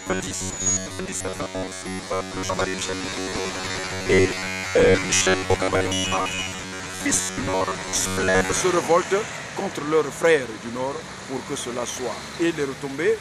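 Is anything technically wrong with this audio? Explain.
Yes. From 0.01 to 8.60 s the audio has a robotic sound from repeated short buffers. A rigid, metallic buzz near 93.8 Hz replaces most of the sound, which fits a roughly 10.7 ms chunk being looped, likely because new audio arrived too late. Unlike mains hum layered underneath, the original sound is followed only roughly by the buzz.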